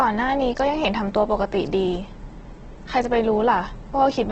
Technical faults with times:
0.00-4.32 Opus compression

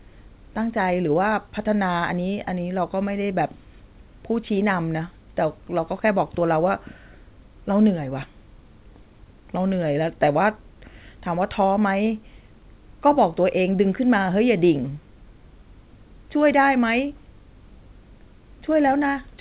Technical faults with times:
none

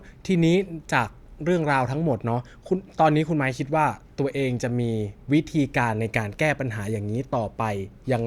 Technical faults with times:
none

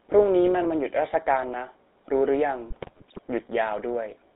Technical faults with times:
0.00-4.35 GSM full-rate codec
2.70-3.22 GSM bit errors

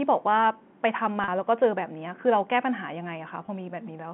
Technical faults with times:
1.24-1.28 packet loss with pitch repetition
3.46-3.48 packet loss with pitch repetition

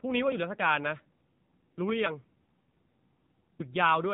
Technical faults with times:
0.00-4.14 AMR narrowband mobile codec

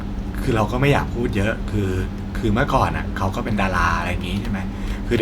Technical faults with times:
none

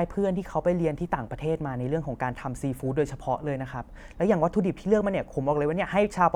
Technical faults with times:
none

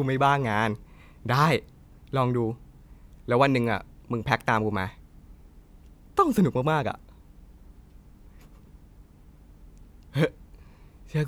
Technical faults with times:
none

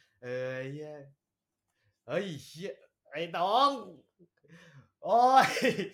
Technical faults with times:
none

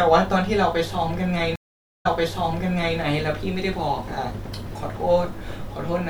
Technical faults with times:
1.56-2.99 stream reconnect

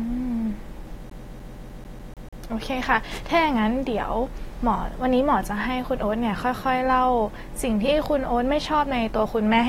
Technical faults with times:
1.10-2.43 CD stuck on one turn

